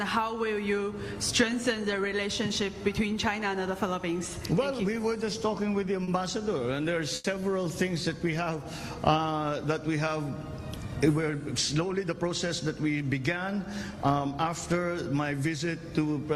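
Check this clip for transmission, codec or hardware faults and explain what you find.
Two transmission faults show up here, both from the jitter buffer on the receiving end.

Short stalls from a late packet hit at 6.03 to 6.09 s and 7.15 to 7.26 s. Each time, a packet arrived late, so the buffer ran dry and the receiver held the last sound, for 40 ms and then 90 ms, until the packet arrived. Nothing's lost, but the sound drags briefly with a faint buzz or dip.

A jitter buffer speed-up runs from 11.75 to 12.31 s. Too much audio had piled up in the buffer, so the receiver trimmed out tiny pitch-period slices, around 70 ms in total, and played that stretch at 110% speed. The pitch stays put, but it sounds noticeably hurried.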